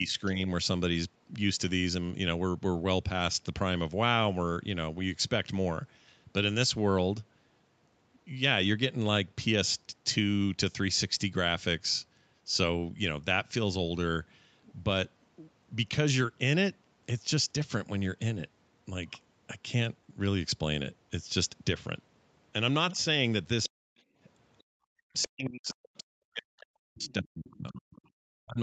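Right at the start, 0 to 0.39 s, there's speech suppressed in double talk: the speech dips slightly, likely because the echo canceller couldn't tell the talker from loudspeaker echo and pulled both down. A faint scrap of the other side's voice leaks through at 0.25 to 0.29 s.

Around 22.93 s it gets heavier. From 22.93 to 23.75 s the speech is pushed down very hard in short bites, and from 22.95 to 25.26 s the other side's voice leaking through is fairly audible, probably residual loudspeaker echo the canceller didn't fully remove.

Inside that stretch, 24.03 to 24.69 s, the background is gated by the echo canceller: the room sound drops by about 31 dB for a moment, then comes back once the canceller lets go.

From 24.97 s to the end the speech is again cut very deep during double talk, and from 27.04 s onward a faint leak of the other side's voice sits underneath. Throughout, the Opus call path and mic processing leave nothing above 8 kHz.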